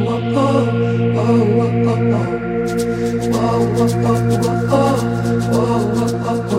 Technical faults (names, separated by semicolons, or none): none